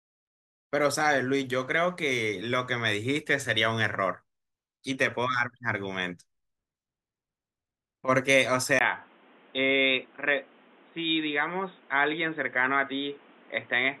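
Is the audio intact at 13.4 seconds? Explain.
No. At 13.4 s the speech is inside a stretch, from 8.79 s to the end, that sounds like an input switched to a poorer device. After a 20 ms gap, nothing passes above 3.8 kHz, leaving it dull and boxy over faint new background noise, likely from a narrower-band microphone.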